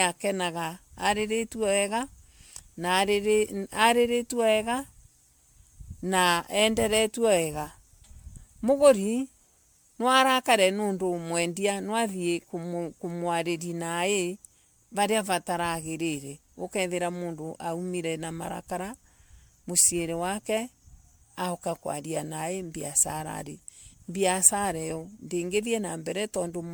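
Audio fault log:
Throughout: generation loss. The speech has a swirly, watery, hollow character and consonant onsets come out soft and smeared, well beyond what a single MP3 pass at the rate it points to, around 128 kbit/s, would give. The likely cause is repeated MP3 decoding and re-encoding, maybe seven or so passes, each quantising on a shifted frame grid so noise and spectral gaps stack up. Content still reaches about 20.1 kHz.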